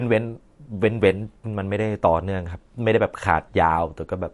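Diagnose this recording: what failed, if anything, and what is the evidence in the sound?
The codec stage is where this went wrong, and the damage is plainly audible across the whole speech clip. Nothing comes through above 11.3 kHz, a hard treble ceiling typical of a starved encoder. This is likely MP3 compression at a low bitrate, roughly what you'd get around 48 kbps. With so few bits, the encoder zeroes weak frequency lines that flicker frame to frame, which gives the speech that watery, smeared character, especially on s sounds.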